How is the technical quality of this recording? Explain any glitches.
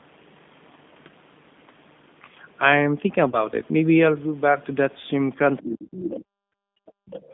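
The recording has clearly audible telephone-codec damage throughout, plus a concealed packet loss and a cluster of echo-canceller problems in the last two seconds.

G.729 codec: Across the whole clip the speech is confined to roughly 150 Hz to 3.6 kHz and has a rough, slightly synthetic texture, which fits an 8 kbit/s G.729A encoding. The decoder rebuilds speech from a filter model and a few pulses per frame, so the band-limiting is steady rather than intermittent.

VoIP packet loss concealed by the speech codec: From 3.30 to 3.48 s, about 30 ms of audio goes missing, consistent with a single lost packet. The decoder extends its last pitch and filter into a fading buzzy tone or coloured noise, then takes longer than the gap itself to recover. That slow recovery, rather than a clean click or silence, distinguishes it from a simple dropout.

Other side's voice leaking through: Faint second-voice fragments appear at 5.58 to 5.63 s, 5.91 to 6.14 s, 6.86 to 6.91 s and 7.07 to 7.24 s. 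They sit about 15 to 35 dB below the main speech. The likely cause is loudspeaker playback that the echo canceller did not fully remove. Unlike gating, these fragments add sound rather than taking it away.

Speech suppressed in double talk: From 5.58 to 6.28 s, about 0.7 s, the main speech dips by up to roughly 30 dB. This coincides with the leaked voice, which points to the likely cause: with both sides talking at once, the canceller attenuated the talker along with the echo. Here the speech itself is pulled down.

Background gated by the echo canceller: From 6.56 to 7.07 s, for about half a second, the room noise drops by about 39 dB and then returns. The canceller clamps the microphone while the far end is playing. This is distinguishable from double-talk suppression because the background, not the speech, vanishes.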